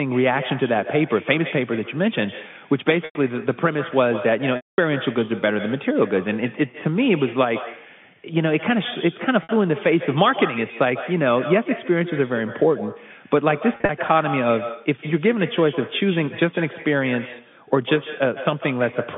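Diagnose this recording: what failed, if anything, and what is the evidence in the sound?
Echo with no canceller, call processing stage: every phrase is shadowed throughout by a thinner copy about 14 dB down, arriving roughly 150 ms late. The far end's loudspeaker feeds its microphone, and no canceller removes that return before it travels back.

Packet loss with pitch repetition, network stage: gaps at 3.05–3.15 s (100 ms), 4.56–4.78 s (220 ms), 9.43–9.49 s (60 ms) and 13.73–13.89 s (120 ms scattered, runs up to 40 ms). Concealment repeats the last pitch period, giving a brief buzzy hold. The longer gaps fade toward silence before cross-fading back.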